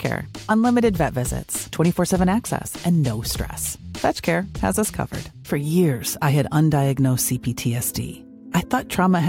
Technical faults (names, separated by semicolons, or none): sample clock jitter